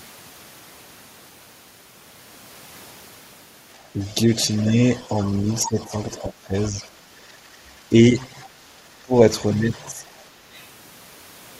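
From 3.74 to 6.88 s the other side's voice is leaking through, about 25 dB below the talker, a second voice likely left by an echo canceller that did not fully remove the loudspeaker signal. Overlapping it, from 3.93 to 6.75 s, the talker's speech is suppressed in double talk, likely because the canceller could not separate the two voices and turned both down. The talker dips in pieces, by up to about 15 dB, for roughly 0.7 s in total. From 7.19 to 7.51 s the background is gated by the echo canceller: the room sound drops by about 6 dB while the loudspeaker plays, then returns. From 7.89 to 7.95 s a short double-talk dip of about 5 dB likely has the same cause. From 8.17 to 8.42 s a faint scrap of the far voice, around 30 dB down, likely leaks past the canceller. From 9.02 to 10.05 s speech is suppressed again in double talk, likely as the canceller clamps down, with cuts of up to about 20 dB totalling roughly 0.3 s. 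From 9.53 to 10.62 s the other side's voice leaks through at about 30 dB below the talker, likely residual loudspeaker echo.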